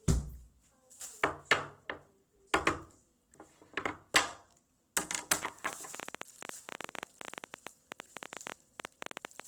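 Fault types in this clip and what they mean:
Opus compression: The sound is grainy and rough throughout, with tonal parts turning noisy rather than swirling, the signature of a low-rate codec that refills starved frequency bands with folded or noise-like content, likely Opus in its music mode at a rate around 16 kbps. On a spectrogram the upper bands look smeared and speckled instead of holed, with content running to a sharp ceiling near 20.6 kHz.
Train of clicks: From 5.31 s to 9.41 s a stream of similar, sharp ticks rides over the sound, about fifty in all at roughly 12 per second but unevenly spaced, some standing around 15 dB above the surrounding level. Their likely source is electrical interference or a faulty connection. The waveform shows narrow spikes poking out of the signal, and the spectrogram shows thin vertical lines spanning the full frequency range.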